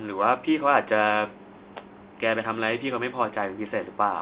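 No technical faults are present in the speech; it carries the narrow band of G.711 telephone coding, with nothing above 4 kHz, which fits mu-law coding at 8,000 samples a second, and the faint noise that tracks the signal's level belongs to that format.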